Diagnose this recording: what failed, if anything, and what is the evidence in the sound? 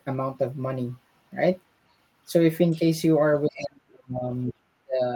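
Call processing at the talker's end failed, most likely an echo canceller that let the far end's loudspeaker sound back into the microphone path. The result is the other side's voice leaking through: a faint scrap from 2.71 to 2.77 s, roughly 30 dB under the speech, then a louder fragment from 3.53 to 3.63 s, only about 20 dB down. Both are brief remnants the canceller failed to subtract.

The same canceller likely failed again when both sides spoke at once, producing speech suppressed in double talk. Unable to separate the near talker from the echo, it attenuated everything. From 3.46 to 4.24 s the speech sinks by as much as about 35 dB for most of that stretch, overlapping the second leak. From 4.5 to 5.0 s it dips just as deeply.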